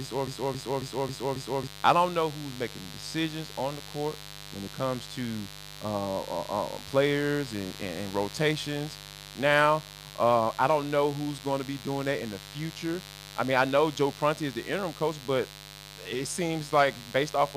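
From the very start until 1.67 s, a broken-record loop repeats one 272 ms fragment five times, likely from a stalled stream. It shows as identical repeating blocks in the waveform. A mains buzz runs throughout at about 15 dB below the speech. Rectifier-style spikes on 50 Hz mains give a raspy tone, seen on a spectrogram as evenly spaced horizontal lines stacked at 50 Hz intervals.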